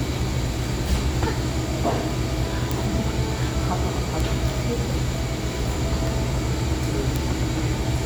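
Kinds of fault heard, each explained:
Bit error spike: A single flipped bit throws one or two samples far off, then back. Three sharp ticks stand out here, two peaking around -5 dBFS and one around -11 dBFS.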